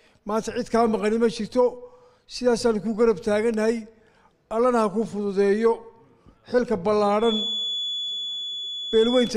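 From 7.17 s to the end at 9.37 s, a thin, steady whistle near 3.4 kHz sits roughly 10 dB below the sound, swelling and fading slowly in level. This is a feedback whistle, likely from a loudspeaker-to-microphone loop held just at the edge of feedback, so one frequency rings on. Unlike full howl-round, it never builds or runs away, and its slow swelling and fading sets it apart from the fixed level of an electrical tone.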